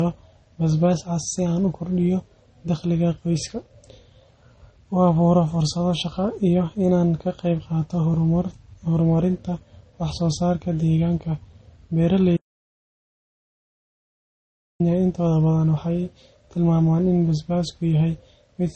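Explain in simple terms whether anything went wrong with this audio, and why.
Two things went wrong. The speech sounds dull and smeared, with nothing above about 8.4 kHz. Two kinds of compression artefacts are heard together, so this is likely transcoding between lossy codecs rather than a single codec.

From 12.37 to 14.80 s, about 2.4 seconds, there is an audio dropout to silence, most likely from lost input. The gap is dead silence with no room tone, unlike a natural pause, and speech resumes at "intooda badan".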